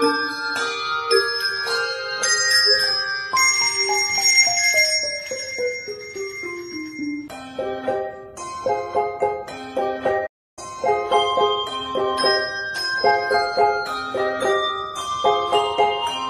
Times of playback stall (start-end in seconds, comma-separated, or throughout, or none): 10.26-10.59